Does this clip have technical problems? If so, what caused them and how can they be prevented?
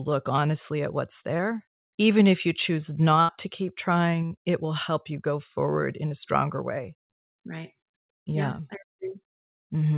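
Yes. The speech has two kinds of network fault, heard through a narrowband call path with nothing above 4 kHz, which fits G.711 telephone coding.

Short concealed packet loss occurs at 0.36, 1.37, 4.26 and 6.09 s. At each point, about 20 ms of audio (40 ms at 4.26 s) failed to arrive in time. The receiver extended the preceding sound and blended back, leaving a brief smear or wobble. These are too short to fade. A larger jitter buffer or forward error correction on the link would prevent these gaps.

A burst of packet loss runs from 3.21 to 3.30 s, with about 80 ms missing. The concealment holds the last sound and turns it down, so it becomes a dying buzz or hiss. Speech then resumes further along with a piece skipped. The audible fade and the lost content set it apart from the short smears. A more stable network path, or redundancy that protects consecutive packets, would prevent it.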